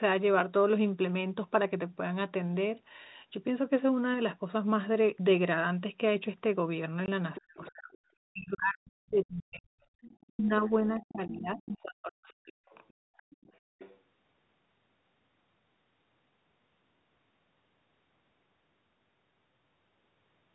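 At 7.06 to 7.08 s there is packet loss filled with silence: a single 20 ms packet went missing and the receiver inserted digital silence in its place. The result is a short, hard-edged hole in the speech. The speech cuts off abruptly and comes back abruptly rather than with a smooth fade.

From 7.35 to 7.98 s the other side's voice leaks through. A second talker is audible underneath at about 15 dB below the main speech, likely because a loudspeaker on the talker's device fed the far end back into the microphone and the echo canceller left a residue. Overlapping this, from 7.39 to 7.94 s, the speech is suppressed in double talk. The main voice dips and breaks up, falling by as much as roughly 40 dB at its deepest, for about half a second in total.

The same suppression returns from 8.26 to 9.82 s, with around 1.5 s of the speech pushed down in pieces. A fainter echo leak follows from 10.02 to 10.26 s at about 25 dB below the speech. 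Double-talk suppression then hits again from 10.28 to 12.65 s, chopping roughly 2 s of the talker's voice. The canceller, likely unable to separate near speech from loudspeaker echo, attenuated both. Finally, from 12.67 to 13.97 s, the other side's voice leaks through once more at about 25 dB down. It sounds secondary behind the main talker.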